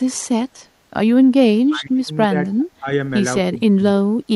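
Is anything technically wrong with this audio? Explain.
Yes. Two faults are audible in this speech.

Speech suppressed in double talk occurs at 1.57 to 2.1 s, 2.29 to 2.33 s, 2.8 to 2.87 s and 3.51 to 3.84 s. The echo canceller likely couldn't separate the talker from the far side's loudspeaker echo while both spoke, so it turned everything down. The voice dips by around 30 dB in the first stretch, with milder dips of 10 to 20 dB later.

Echo leak appears at 2.6 to 2.65 s. The far side's echo canceller likely missed part of what its microphone picked up from the loudspeaker. A faint, brief copy of the voice returns 284 ms late, about 35 dB below the speech.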